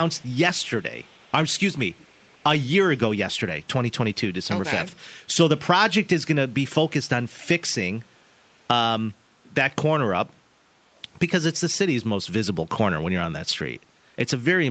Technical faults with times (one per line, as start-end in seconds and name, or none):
0.11-1.60 echo leak